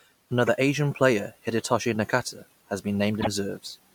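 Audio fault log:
0.46 to 0.49 s, damaged data in a compressed stream: a quick blip cuts across the speech here. Some of the compressed data at this spot is corrupt, so the decoder misreads a frame, loses its place and has to hunt for the next valid frame header.
3.18 to 3.27 s, damaged data in a compressed stream: the same fault again, but longer. Here the decoder stays lost for longer before it gets back in step.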